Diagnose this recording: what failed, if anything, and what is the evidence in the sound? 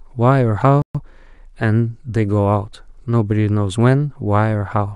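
The speech just drops out at 0.82 s and stays silent until 0.95 s, a gap of about 128 ms, then picks up again. That's a playback stall at the buffer stage, most likely the player running dry or its thread getting blocked.

Straight after, from 0.95 to 1.07 s, the speech comes out hurried at roughly twice normal speed but at its normal pitch. That's time-compressed catch-up: the player cuts and cross-fades small slices to clear the backlog from the stall.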